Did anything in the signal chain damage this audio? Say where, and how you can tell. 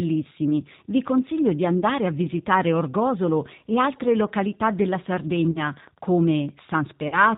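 Yes. Throughout, the audio sounds rough and slightly synthetic with nothing above 4 kHz: codec damage from G.729 at 8 kbit/s rebuilding speech from filter and pulse models.

Brief smears at 1.80 s (after "vi consiglio di"), 5.51–5.60 s (after "e altre località della") and 7.08–7.18 s are VoIP packet loss concealed by the speech codec. The decoder extrapolated across 20–40 ms network gaps.

From 5.30 s to the end, a faint tick about ten times a second, roughly 30 dB below the speech, is Wi-Fi interference. The analogue wiring rectified a 102.4 ms beacon.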